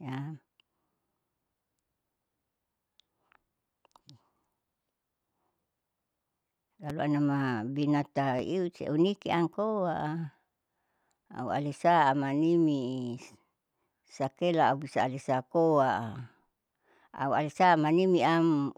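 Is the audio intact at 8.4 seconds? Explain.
No. A loud pop sits on the speech from 8.39 to 8.42 s, a single sharp burst peaking a few decibels above the surrounding level. It was likely caused by a sudden voltage step or spike, from a plug, switch, static discharge or driver glitch, added directly to the signal and then shaped by the circuitry downstream. It is heard as one abrupt pop laid over the speech, which continues underneath.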